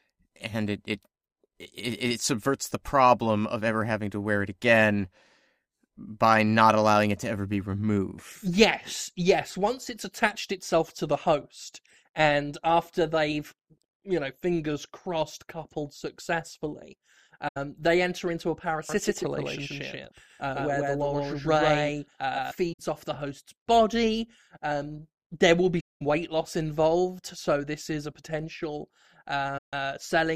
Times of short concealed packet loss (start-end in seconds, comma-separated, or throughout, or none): none